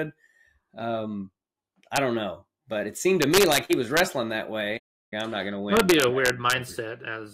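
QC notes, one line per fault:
1.96, 3.22–4.00 and 5.77–6.53 s, integer overflow: gain pushed peaks about 1 dB past the integer limit, and instead of being held there they wrapped to the opposite sign. Each overshooting peak jumps across the full range, giving harsh cracks far sharper than clipping.
4.77–5.13 s, playback stall: the output goes silent mid-flow for about 343 ms before resuming, most likely because the player ran short of data or its thread was blocked. The gap is heard as an abrupt dropout that breaks the flow of the sound.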